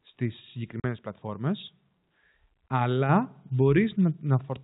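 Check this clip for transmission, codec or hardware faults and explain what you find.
Two kinds of fault occur: packet loss filled with silence, twice, and one upward microphone volume step, heard through G.711 telephone coding.

Packet loss filled with silence comes at 0.80 to 0.84 s, a 40 ms hole fitting two 20 ms packets, and at 2.69 s, about one packet long. Missing audio became true silence with hard edges, not smeared repeats.

The microphone volume stepped up at 3.09 s by about 4 dB in one jump. Speech and background rise together, unlike a gradual gain ramp, because the device input level itself changed.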